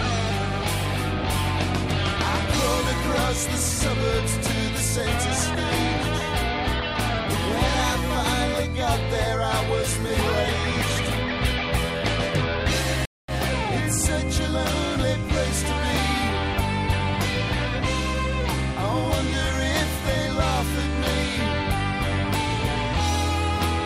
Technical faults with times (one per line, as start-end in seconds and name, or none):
13.05-13.31 stream reconnect